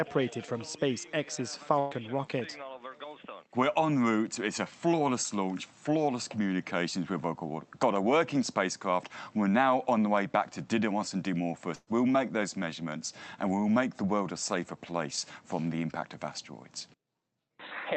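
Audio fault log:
1.79–1.93 s and 11.75–11.89 s, burst of packet loss: about 120 ms lost each time and replaced by a fading buzz or hiss. The spectrogram shows a smeared, decaying band, then the audio jumps ahead; the second gap ends in a 10 ms dropout.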